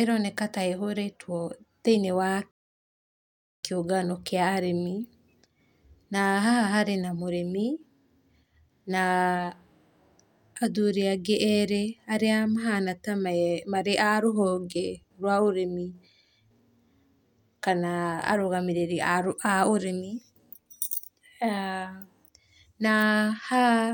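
At 2.51 s, right after "ta ĩhorĩtwo thĩinĩ wa", the speech drops into a rebuffering stall: playback used up its downloaded audio and waited for more. Silence lasts until 3.64 s, adding about 1.12 s, and the speech then continues with "kĩũngano kĩa arĩmi" exactly where it broke off, with nothing skipped. On a waveform this is a flat gap cut abruptly into the signal, and on a spectrogram it is a blank vertical band with clean edges.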